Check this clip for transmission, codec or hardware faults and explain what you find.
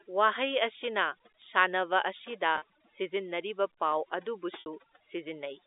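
Two faults are audible in this speech clip: overly aggressive noise removal throughout, and two short packet losses. Both sit within the 300 Hz to 3.7 kHz band of the G.711 telephone line.

Overdone noise removal, throughout: the suppressor pushes frequency bands near its noise estimate almost to zero, leaving near-silent gaps with twinkling specks.

Packet loss with pitch repetition, at 2.58 to 2.62 s (40 ms) and 4.60 to 4.66 s (60 ms): the receiver bridged missing audio by repeating the last pitch period. The first is heard as a brief held, buzzy tone, while the second fades into silence before the speech returns with a short cross-fade.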